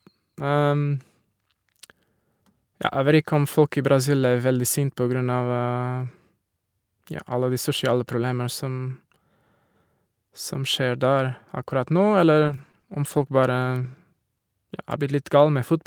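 From 12.37 to 13.17 s the speech breaks up with repeated packet loss (robotic sound). Four short holes, the longest 40 ms, leave about 100 ms of audio missing, and each is patched by stretching the preceding sound forward, around a fifth of a second rebuilt in all. That recurring patching gives the choppy stutter. A single dropout would leave one clean gap, while this returns several times within under a second.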